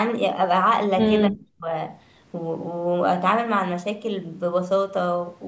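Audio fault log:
1.27–1.67 s, speech suppressed in double talk: for about 0.4 s the speech drops sharply, falling by about 40 dB at its deepest so it nearly vanishes before recovering. On the waveform the envelope collapses to a thin sliver. On a spectrogram the speech energy fades across every band up to the 8 kHz ceiling set by the call processing. The likely cause is an echo canceller treating simultaneous far-end talk as echo and attenuating the near-end talker along with it.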